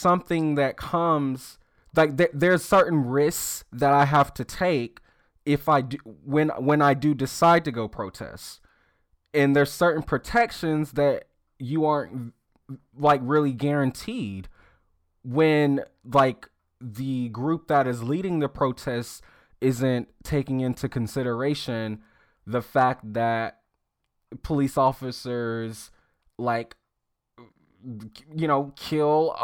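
Nothing goes wrong anywhere in this bit of speech, so there's no problem to point to at any moment.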